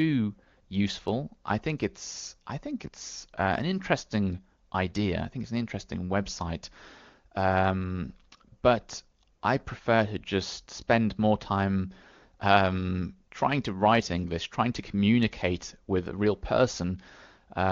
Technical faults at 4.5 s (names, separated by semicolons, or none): none